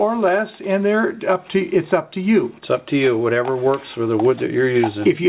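The audio, carried over a call path whose band stops at 4 kHz, consistent with G.711 A-law telephony coding, has a repeated buffer at 2.85 s: a roughly 5 ms block plays twice, producing a brief click or buzz where new audio arrived too late.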